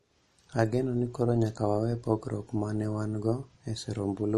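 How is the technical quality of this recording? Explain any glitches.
Technical quality is compromised by clearly audible coding damage. The likely cause is MP3 compression, throughout, with a low bitrate stripping everything above 13.4 kHz. Weak frequency lines flicker between frames, giving watery, swirly speech.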